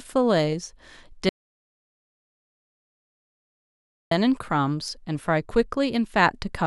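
At 1.29 s the speech drops out to dead silence until 4.11 s, no room tone at all, likely a lost input while recording continued.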